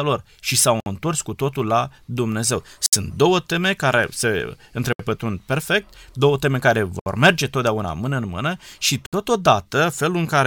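At 0.80, 2.86, 4.93, 6.99 and 9.06 s, a gap at a join of encoded pieces opens in the speech for about 59 to 67 ms. Two-second segments were joined with their encoder delay and end padding left in. Each gap has smeared edges, and the speech then resumes exactly where it stopped. That strict two-second spacing and the absence of any lost sound set it apart from random dropouts.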